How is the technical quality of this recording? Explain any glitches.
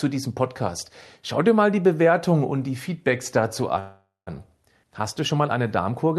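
The recording has one clear glitch, a call audio freeze in the speech, heard through a call path whose high end tops out around 12 kHz. From 3.79 to 4.29 s, packets were likely held up in transit and the jitter buffer ran dry. The receiver stretched the last sound into a fading buzz or hiss for about half a second, ending in 160 ms of silence. When the packets arrived, the speech resumed where it had stopped with nothing lost, but now running 474 ms late.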